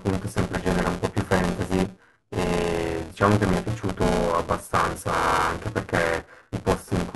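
A robotic buzz at 200 Hz rides on the speech from start to finish, present wherever there is signal and gone in the gaps. This is buffer tearing: the writing program and the playback hardware have slipped out of step, so every 5 ms period, which points to a buffer of about that length, splices in roughly a third of audio from around 10 ms earlier, with hard joins on both sides.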